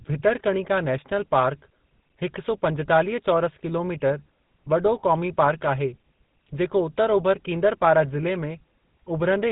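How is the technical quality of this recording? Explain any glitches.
The recording is damaged throughout by GSM full-rate codec artefacts. The codec rebuilds speech from a vocal-tract model fed with sparse regular pulses, so it sounds buzzy and gravelly with nothing above 3.9 kHz, which fits 13 kbps. This buzz is what distinguishes it from plain telephone band-limiting.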